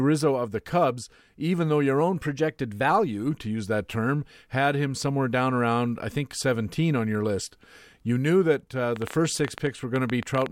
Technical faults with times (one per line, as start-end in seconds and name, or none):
2.01-2.90 drift correction step
8.96-10.47 train of clicks